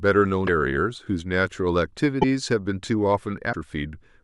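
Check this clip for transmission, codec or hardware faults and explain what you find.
There are three short glitches in this speech, all of the same kind: at 0.46 to 0.49 s, 2.21 to 2.24 s and 3.52 to 3.55 s. Each lasts about one MP3 frame of 26.1 ms. The likely cause is a broken MP3 bit reservoir. When frames are dropped, the next frame reaches back for borrowed data and finds bytes from some other frame instead. The speech briefly garbles and skips forward at each of those points.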